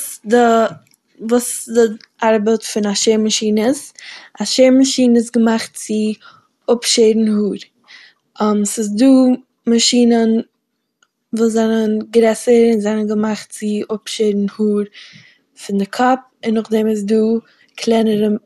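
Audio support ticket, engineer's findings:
MP2 compression, throughout the speech, 0 s to end. Dull, band-limited top: nothing above 12.2 kHz. Plainly audible granular, gurgling distortion. Likely an MPEG Layer II encode starved of bits, consistent with roughly 80 kbps. Upper sub-bands switched off, remaining bands coarsely quantised and flickering on and off, giving the grainy texture.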